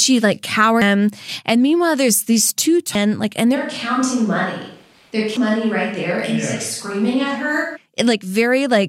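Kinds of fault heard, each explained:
Damaged data in a compressed stream: at 0.82, 2.95 and 5.37 s, brief blips break into the speech. Corrupted bytes in the coded stream make the decoder misread the frames there, lose sync and search for the next valid frame header before playback continues.
Switch to a distant microphone: from 3.57 to 7.75 s the speech turns roomy and hollow, thinner in the bass and about 5 dB quieter, with room noise about 35 dB below it. The likely cause is the close microphone dropping out, leaving a farther one.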